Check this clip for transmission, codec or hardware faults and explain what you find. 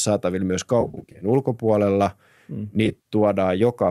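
Two bursts of AAC frame loss with concealment break up the speech. The first runs from 0.81 to 1.25 s. The second runs from 2.86 to 3.11 s. Frames dropped out in scattered runs, each a few tens of milliseconds at most. About 240 ms went missing across 400 ms, then 140 ms across 240 ms. The decoder filled each gap from the last good spectrum. The gaps were too short to fade to silence, so the sound turns smeared, noisy and phasey instead. The short frames point to low-delay AAC, likely the codec on this link.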